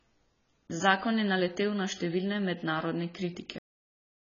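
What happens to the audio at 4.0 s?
At 4.0 s there is only digital silence. The speech stops abruptly at 3.58 s, mid-sound, with no decay, and nothing follows through 4.26 s. This is a cut-off end: the final buffers were never written or played, so the recording simply halts.

The speech before the cut also sounds dull and smeared, with a fizzy, warbling edge on sibilants and nothing above 7 kHz. That points to heavy AAC compression, likely AAC-LC at a very low bitrate near 16 kbps, which lowers the bandwidth and leaves spectral gaps.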